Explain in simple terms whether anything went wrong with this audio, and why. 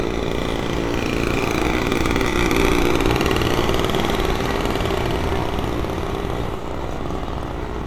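From 2.28 to 6.66 s, digital radio blending to analogue: the receiver fades to the FM broadcast, adding faint hiss.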